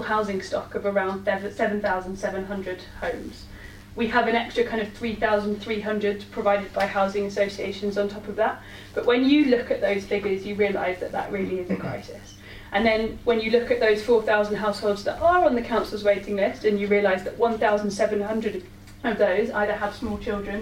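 From start to finish, a faint computer activity noise sits under the sound. It is a buzzy, chirping texture, pulsing at around a hundred times a second. It stays well below the wanted sound, somewhere near 35 dB down. The cause lies in the computer itself. As the processor, graphics card or mouse change their load, they disturb the ground the audio circuit shares. That disturbance leaks into the signal. It follows the machine's activity, not the audio.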